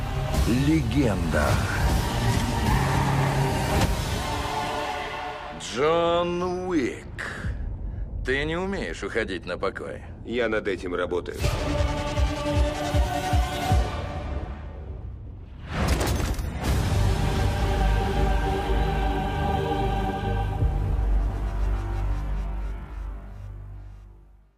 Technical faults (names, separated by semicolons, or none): none